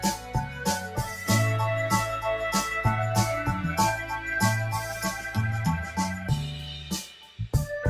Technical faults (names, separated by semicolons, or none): noise suppressor applied to music or sounds; sound cut by the noise suppressor